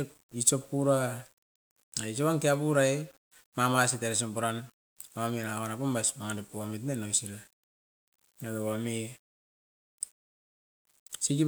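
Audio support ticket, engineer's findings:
Grainy, gritty distortion across the whole speech clip, tracking the signal rather than sitting as steady hiss; worst in quiet passages and word tails, where low-level detail breaks up or sputters toward silence. Error floor roughly 30 dB under the speech. Likely component: low bit depth without dither, with samples rounded to 8 bits and no dither applied, so quantisation error stays correlated with the waveform and is heard as distortion instead of benign noise.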